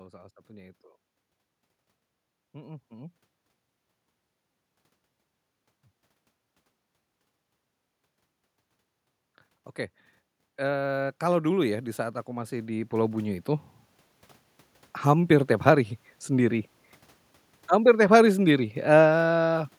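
From 10.56 s to 13.5 s the automatic gain control judged the input too quiet and steadily raised its gain by about 13 dB. The result is automatic gain rising: the speech and the background noise beneath it swell together over those three seconds.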